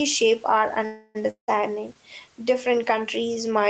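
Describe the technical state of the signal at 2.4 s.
At 2.4 s the speech carries a DC offset, as it does across the whole clip: the waveform sits shifted off the zero line by a constant amount. It isn't audible itself, but it eats headroom and shows on a spectrogram as a steady band of energy at the very bottom, near 0 Hz.

The same moment also shows gain pumping, present throughout, with the level swinging by around 5 dB. The likely cause is input gain set far too high, with a fast limiter clamping down on each loud syllable. On the waveform the envelope looks flattened and squashed.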